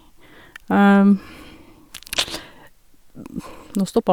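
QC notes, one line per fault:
No fault found.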